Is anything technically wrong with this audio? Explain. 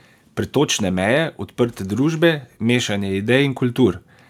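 No, nothing technically wrong can be heard in this speech recording. There is no moment in it where a fault shows up.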